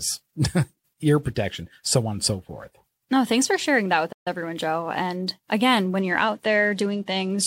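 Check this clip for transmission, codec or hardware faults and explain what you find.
Two faults are audible in this speech clip.

At 4.12 to 4.27 s, just after "for sharing that with", the sound cuts out for about 136 ms and then resumes. This is a playback stall, likely from the player running short of buffered data.

From 5.99 s to the end, the treble dulls and gritty noise rises. This is a Bluetooth SBC bit pool drop. It sounds like a congested link forcing the bit pool from 31 down to 15, around 105 kbps, which starves the upper sub-bands and coarsens quantisation.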